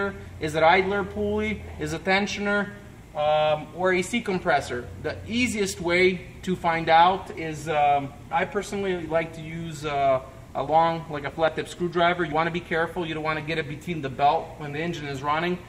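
At 11.48 s the audio jumps forward, skipping about 20 ms, most likely a dropped buffer (overrun) where unread samples were overwritten.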